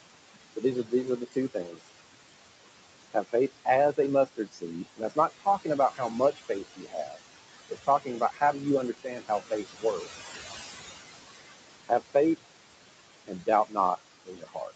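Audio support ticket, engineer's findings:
Noise suppressor artifacts, whole clip. Suppressor pulling steady-noise bands down about 21 dB per frame; room noise, about 11 dB under speech, drops in gaps and swells beneath speech.

Speech cut by the noise suppressor, at 0.56–1.89, 3.14–7.17, 7.69–8.62, 8.93–10.17, 11.86–12.39 and 13.27–14.71 s. Suppressor misclassifying quiet speech as noise, ducking it up to about 21 dB. Soft consonants and word endings swallowed, worst around 3–7 s, roughly one and a half seconds lost there.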